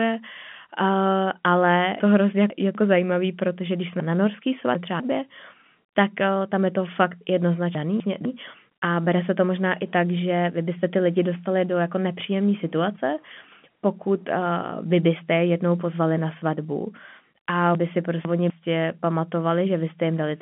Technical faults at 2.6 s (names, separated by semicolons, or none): chunks out of order